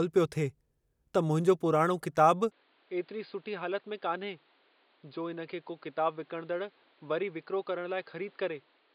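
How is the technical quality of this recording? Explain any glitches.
The recording has one clear fault. At 2.52 s, right after "पुराणो किताबु", the speech changes character and stays that way to the end. This is most likely an input switched to a poorer device. The new input passes nothing above 4.9 kHz, so the speech turns dull and boxy. The level drops by about 5 dB. A faint new background noise appears, well below the speech. There is no gap at the switch.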